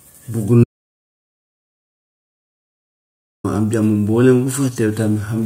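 At 0.64 s the speech cuts out mid-flow into an audio dropout to silence lasting 2.8 s, until 3.44 s. The gap is silent with no room tone, likely a lost input or mute while recording continued, so that content is gone.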